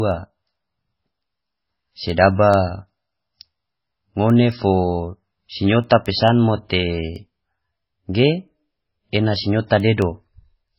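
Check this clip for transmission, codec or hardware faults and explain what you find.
Two faults are present in this speech recording.

Throughout, the sound is dull and watery, with nothing above 5.6 kHz, and is likely caused by heavy MP3 compression at a very low bitrate, around 16 kbps.

From 0.11 s to 10.68 s, sharp ticks recur steadily about every 0.2 s. These are word clock ticks: an unlocked receiving clock, off by roughly a hundred parts per million, slips a single sample each time.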